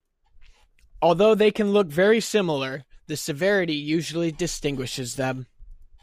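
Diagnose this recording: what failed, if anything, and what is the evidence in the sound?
Nothing failed; no fault is audible in the recording.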